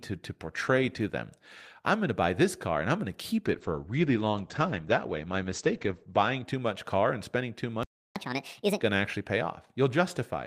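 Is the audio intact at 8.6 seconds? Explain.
No. A catch-up at higher speed runs from 8.16 to 8.81 s, and 8.6 s falls inside it. After a stall, the player drains its backlog by resampling the buffered speech to play 1.5 times faster. Because resampling shifts pitch along with tempo, the voice jumps up by about seven semitones and sounds hurried and chipmunk-like. At 8.81 s, playback returns to normal speed and pitch.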